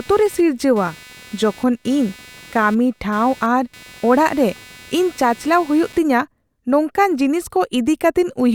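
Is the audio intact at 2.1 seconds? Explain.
No. At 2.1 seconds the speech carries computer activity noise, which runs from the start of the clip to about 5.99 s. Changing load from the processor, graphics card or mouse shifts the audio circuit's shared ground, adding a buzzy, chirping pulse train at around 300 pulses per second, roughly 25 dB below the speech. Unlike steady mains hum, it flickers with the computer's activity rather than holding one constant tone.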